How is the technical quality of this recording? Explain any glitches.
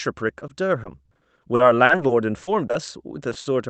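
The technical quality is poor. Speech passes through a call codec whose spectrum stops near 8 kHz, and it is damaged by packet loss.

Repeated packet loss (robotic sound), 0.39 to 2.75 s: more than a dozen gaps, each 60 ms at most, add up to about 440 ms, roughly a fifth of the stretch. The receiver bridges each hole by extending the preceding sound, so the speech turns choppy, with pieces missing. On a spectrogram, harmonics flatten into short smeared bars at each gap. The waveform shows repeated copies of earlier cycles.

Short concealed packet loss, at 3.29 to 3.33 s, 3.33 to 3.37 s and 3.41 to 3.47 s: three brief losses of 20, 20 and 40 ms near the end. Each is filled by continuing the last sound and then blended back into the real signal. They are heard as quick smears or wobbles. On a spectrogram they appear as thin vertical seams where the detail goes smooth. In the waveform, envelope steps mark the joins.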